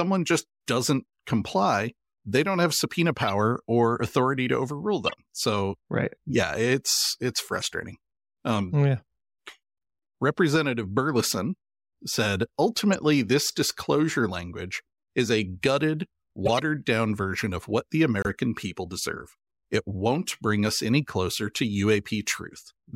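Speech with corrupt frames decoded: damaged bits in several compressed frames were played out instead of being concealed, so misread gains and codes put energy at the wrong frequencies. Short chirps and noise bursts span one to five frames each at 3.22–3.30, 5.06–5.14, 7.60–7.64, 12.92–12.95, 16.45–16.60 and 18.22–18.32 s. The last two are loudest, peaking around -10 dBFS.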